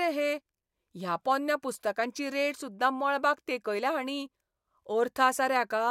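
No technical faults can be heard anywhere in the speech recording, and the signal stays continuous and steady throughout.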